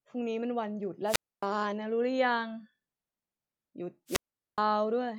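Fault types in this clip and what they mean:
Wireless microphone squelch dropout: the speech twice gives way to a short swell of hiss and then a hole of near silence, about 0.27 s long in the first event between 1.06 and 1.45 s and about 0.42 s in the second between 4.07 and 4.60 s, before it comes back. Both times the radio link from the microphone weakened until the receiver's squelch gate shut off its output instead of passing static.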